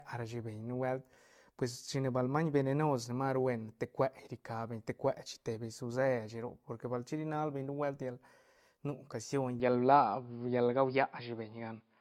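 From the start the speech carries the marks of generation loss, most likely from being decoded and re-encoded with a lossy codec many times over, perhaps around seven passes, in a way that fits an AAC-LC chain at roughly 96 kbit/s. Each pass quantised again on a shifted frame grid, so the errors piled up. The result sounds swirly and hollow, with smeared consonant attacks, worse than a single encode at that rate would leave.

At 9.60 s the input appears to switch to a poorer device, likely another microphone or a headset's call profile, and it stays there to the end at 12 s. The new path passes nothing above 5.1 kHz, so the voice abruptly turns dull and boxy with no gap at the switch. The level shifts by a few decibels, and a faint new background noise, well below the speech, comes in with it.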